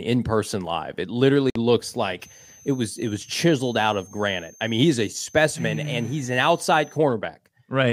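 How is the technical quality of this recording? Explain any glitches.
The recording has two faults. At 1.50 s the speech drops to silence for about 53 ms, then resumes. This is likely a Bluetooth stall: delayed packets let the headphone buffer run empty. From 2.2 to 7.0 s a switching supply whistle sits under the speech. It is a thin tone drifting between 6.1 and 6.4 kHz, about 30 dB below the speech. It comes from a power supply switching at an audible rate.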